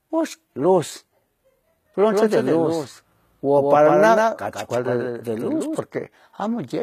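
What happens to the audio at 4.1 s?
A doubled audio track is sounding, running from 2.11 s to 5.79 s. A second full-band copy trails the original by roughly 150 ms, about 5 dB quieter. It has no decay or room colour, so it reads as a hard slapback. The likely cause is a slower second capture path or an edit that left two copies out of step.

HE-AAC compression is also audible here, as it is throughout. The treble is likely rebuilt by spectral band replication, copied up from lower bands. This gives gritty, lispy s sounds and nothing above 14.9 kHz. The damage fits a low bitrate around 20 kbps.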